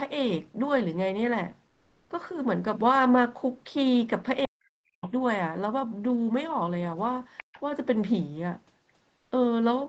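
From 1.69 to 2.09 s, comfort noise replaces the background: a steady, featureless hiss sits in the pause, likely from Opus discontinuous transmission. Its level barely changes, by about 1 dB, so it is the texture that gives it away, not a dropout.

From 4.46 to 5.05 s, speech is suppressed in double talk. The talker's voice sinks by roughly 40 dB in pieces while the other side speaks, likely because the echo canceller turned both down.

The other side's voice leaks through at 5.02 to 5.10 s and again at 7.37 to 7.60 s. These are faint scraps roughly 15 dB below the main speech, likely loudspeaker echo the canceller missed, and they are a second voice rather than noise.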